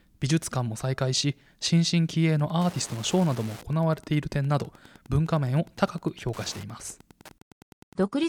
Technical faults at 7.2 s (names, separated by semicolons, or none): Wi-Fi interference